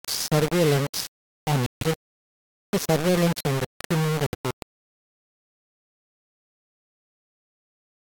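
From start to finish the speech carries a coarse, grainy distortion that rises and falls with the voice, most likely low bit depth without dither. The sound appears to have been rounded to about three bits, so the error tracks the signal instead of sitting as steady hiss, and quiet passages turn gritty and sputtery. The noise is roughly ten decibels below the signal. A waveform shows visible staircase steps, and a spectrogram shows broadband smearing that follows the speech energy.

At 1.66 s, just after "surveillance on", the audio cuts to silence until 1.83 s, a gap of about 150 ms. At 4.27 s, after "surveillance on the criminal", a shorter hole of 64 ms follows, ending at 4.35 s. Both are likely Bluetooth dropouts, where packets arrived too late and were discarded. The lengths fit seven and three lost frames. The waveform shows flat gaps, and the spectrogram shows clean vertical blank bands.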